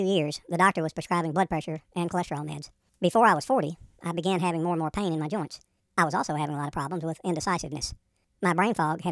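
Speech plays throughout at the wrong sample rate: it runs 1.5 times too fast and sits about 7 semitones high, which fits 16 kHz audio played back at 24 kHz. Unlike a pitch shift or a time-stretch, tempo and pitch rise together by exactly the same ratio.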